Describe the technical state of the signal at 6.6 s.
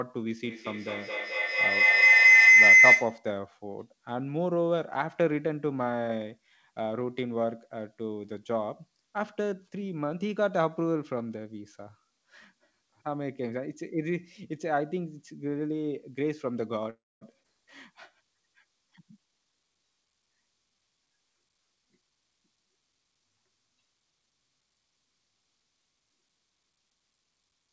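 At 6.6 s the speech is intact, with no dropout, glitch or distortion, only the call codec's usual band limit, with nothing above about 8 kHz.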